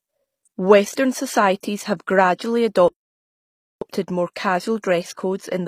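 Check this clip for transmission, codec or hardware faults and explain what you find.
Two faults are audible: HE-AAC compression throughout, and one playback stall.

Throughout, the speech was likely coded as HE-AAC at a low rate, consistent with roughly 24 kbps. Only the lower spectrum is carried; the treble is rebuilt by copying lower bands upward, so its harmonics don't line up. Codec damage is plainly audible, with nothing above 15.5 kHz.

From 2.88 to 3.81 s, after "have gradually", a playback stall silences the output for about 0.93 s, likely because the player ran out of data or its thread was blocked. The speech stops mid-flow, then resumes with "more casual".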